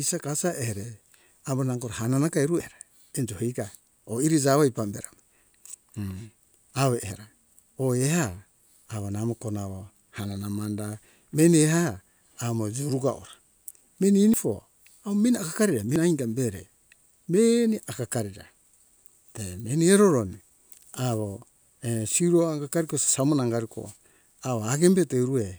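Samples were likely overwritten before being collected, a dropped buffer (overrun): at 2.60 s, between "nango hanana ka eru" and "enjo iga oi iri", speech jumps ahead about 100 ms, then skips roughly 40 ms at 14.34 s and 15.96 s.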